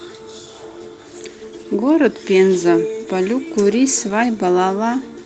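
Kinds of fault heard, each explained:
Lost packet rebuilt from error correction: one 20 ms packet, at about 4.09 to 4.11 s, went missing, and the decoder filled it from the low-bitrate redundant copy carried in the following Opus packet. There is no dropout or silence. Instead, that 20 ms stretch sounds briefly coarser and noisier than its surroundings. The audio is band-limited to about 8 kHz by the call codec, so the repaired frame keeps a similar top end.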